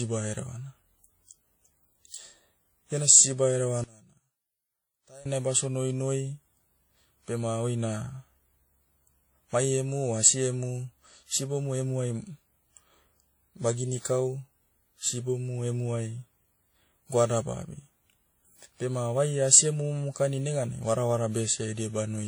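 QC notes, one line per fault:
throughout: transcoding between lossy codecs. The speech carries the artefacts of more than one codec heard together, which likely comes from passing through WMA, then HE-AAC, then WMA again, at rates that point to around 48 kbit/s. Each stage re-encodes the previous one's errors. On a spectrogram the upper bands look blotchy and patchy, with nothing above 20.1 kHz; the waveform shows no obvious change.
3.84–5.26 s: one channel inverted. For this stretch one stereo channel has flipped polarity, so when the channels are summed to mono the shared, centred speech cancels and the level drops by about 25 dB, leaving only a faint residue of the left-right difference. This likely points to a polarity error on one side. The mono waveform shows a sudden collapse in amplitude across the span, and the spectrogram shows a matching dark band.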